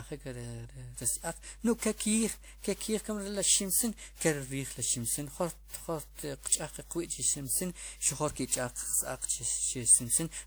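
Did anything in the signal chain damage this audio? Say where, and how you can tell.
Yes, twice. In the analogue wiring there is mains hum: a steady 50 Hz tone, with low harmonics, sits about 20 dB below the speech for the whole clip. A ground loop or nearby transformer is coupling the power line in. Unlike rumble, it holds one fixed pitch.

In the codec stage the speech sounds swirly, hollow and smeared, and consonant attacks blur throughout, yet content reaches about 20.1 kHz. That points to generation loss, likely from roughly five WMA decode-encode passes at a rate near 96 kbit/s. Each pass requantises on a shifted frame grid, so the errors stack up rather than just cutting the band.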